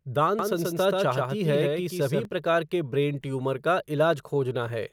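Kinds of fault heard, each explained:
Doubled audio track: A full-band second copy of the speech trails by about 150 ms, roughly 5 dB quieter. It has no decay or room colour. It starts abruptly at 0.39 s and stops at 2.25 s. The likely cause is a slower second capture path.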